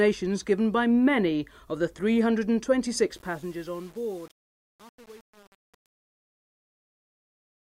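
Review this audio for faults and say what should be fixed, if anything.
The fade-out stage is keeping too few bits and adds no dither, so truncation distortion sets in from 3.11 s to the end at 7.77 s, and it is worst from 3.15 s onward. The coarseness fits a gain path holding only about 7 bits. As the fade-out drops toward the smallest step, the waveform collapses into a few square levels, and the tail turns gritty. To prevent this, run the fade at full word length and apply dither before any reduction in bit depth.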